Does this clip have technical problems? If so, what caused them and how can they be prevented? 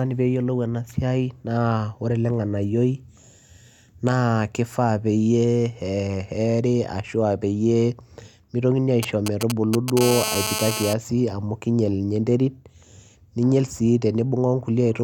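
Yes. From 9.03 to 9.99 s, a galloping dit-dit-dit of short 217 Hz buzzes breaks in, only a little quieter than the speech. These are GSM signalling bursts: a nearby 2G phone sends brief groups of radio pulses, and the audio circuit rectifies them into audible clicks. Switching phones off or keeping them well away from microphones, cables and preamps prevents this.

From 10.01 to 10.94 s, a hard, raspy buzz at 217 Hz with many harmonics sits about 5 dB below the speech. This GSM phone buzz comes from a 2G phone transmitting steadily, as during a call, 217 times a second, with each radio burst rectified by the audio chain. Keeping phones away and using shielded, balanced cabling prevents it.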